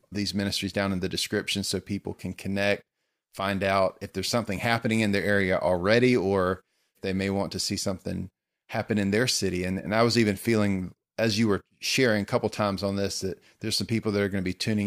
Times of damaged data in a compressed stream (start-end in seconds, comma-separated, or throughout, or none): none